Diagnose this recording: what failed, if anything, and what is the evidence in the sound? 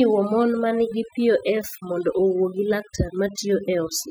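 Overdone noise removal, a processing-stage fault, runs through the whole speech clip. The noise reducer was set too aggressively: it pulls individual frequency bands down or out whenever they sit close to its noise estimate, so the low-level parts of the speech vanish along with the noise. The pauses fall to near silence dotted with twinkling specks. A low-bitrate codec can also sound watery, but here the gaps are gated to near silence rather than smeared.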